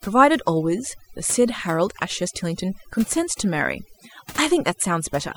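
Overdone noise removal affects the speech from start to finish. A noise reduction stage was set too aggressively, so any frequency band whose level sits close to the estimated noise floor is pulled far down or muted outright. Low-level parts of the voice fall below that threshold and are removed with the noise. Between phrases the background drops to near silence, broken by twinkling specks.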